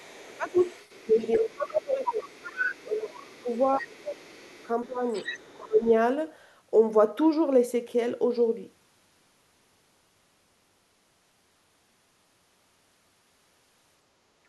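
From 0.0 to 1.7 s the other side's voice leaks through, faint, around 30 dB below the talker, likely the loudspeaker signal reaching the microphone and surviving the echo canceller. On a spectrogram it shows as a weak second set of harmonics under the main voice. Inside that stretch, from 0.15 to 0.58 s, speech is suppressed in double talk: the talker's level drops by roughly 20 dB, visible as a sudden notch in the waveform envelope lasting under half a second. The likely cause is the canceller mistaking the talker for echo while both sides spoke and turning everything down.

A longer suppression runs from 1.06 to 5.86 s, with dips of roughly 25 dB adding up to about three seconds. It sounds like the voice repeatedly sinking and returning, and appears in the waveform as gaps and shrunken bursts, likely from the same double-talk confusion. Within this stretch the leaking voice returns from 2.04 to 4.65 s at around 20 dB below the speech, then grows stronger from 5.12 to 5.9 s at around 15 dB below, likely more residual echo than the canceller could remove. 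Its harmonic traces become clearer against the weakened talker.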